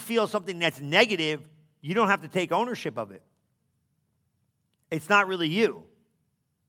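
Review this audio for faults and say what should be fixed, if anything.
No technical faults can be heard anywhere in this speech recording. Nothing needs to be fixed.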